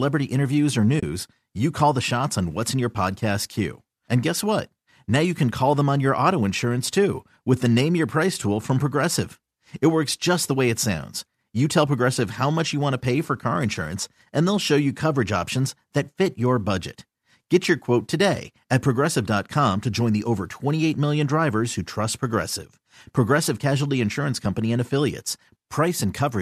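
A speech clip with one brief dropout: AAC frame loss with muting from 0.99 to 1.03 s, between "interviews or" and "you call the shots". For about 30 ms the decoder had no data and zeroed the spectrum, which fits roughly three lost frames. The overlapping windows fade the sound down and back up, so it is a soft-edged hole. A spectrogram shows a narrow, full-band vertical gap with tapered edges, and the waveform shows the envelope sliding to silence and recovering. The lightly coded sound around it is likely low-delay AAC compression.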